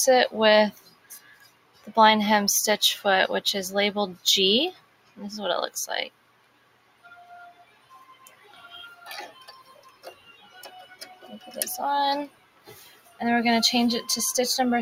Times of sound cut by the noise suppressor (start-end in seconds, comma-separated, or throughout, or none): 0.73-1.90, 4.73-5.18, 6.10-7.24, 7.52-8.61, 9.59-10.55, 12.29-13.20